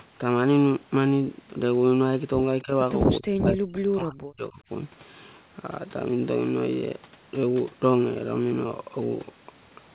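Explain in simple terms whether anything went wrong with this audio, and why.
Two moments of speech suppressed in double talk stand out. At 2.62 s the speech dips briefly for about a tenth of a second. From 3.19 s to 4.61 s it nearly vanishes. The likely cause is an echo canceller turning down both the talker and the loudspeaker echo while both people talked at once.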